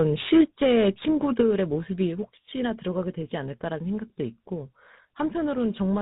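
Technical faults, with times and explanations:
Throughout: tandem speech coding. The sound has been through more than one speech coder in a row, and the last one sounds like GSM full rate at 13 kbit/s, with what fits a CVSD and G.711 A-law stretch ahead of it. Each coder works on the already mangled output of the one before, so the errors stack up. That's why the speech comes across rough, a bit muffled and warbly, with nothing above 3.8 kHz.
0.41 s: microphone volume stepped down. Speech and background both drop by about 2 dB in a single abrupt step rather than a gradual fade. The likely cause is the call software deciding the microphone input was running hot and turning the device's input volume down in one go. It's a small drop.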